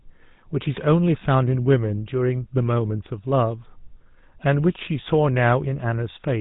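From start to end, the speech carries the damage of the GSM full-rate codec. Nothing survives above 4 kHz. The vocal tract is modelled and driven by sparse, regular pulses. That leaves a plainly audible buzzy, gravelly roughness, which fits a 13 kbps GSM link.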